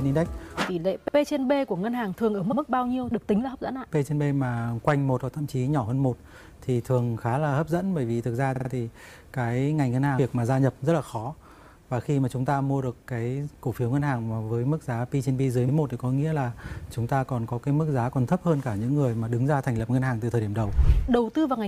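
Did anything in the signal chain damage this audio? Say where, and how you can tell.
Yes. Repeated frames at the codec or storage stage: the audio stutters at 1.07, 2.51, 8.55 and 15.68 s as 46 to 70 ms blocks replay, three extra times at 8.55 s.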